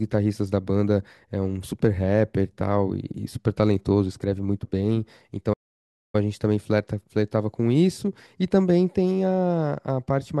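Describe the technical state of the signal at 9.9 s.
At 9.9 s the speech plays through intact, with no dropout, click, distortion or other fault to be heard at that point.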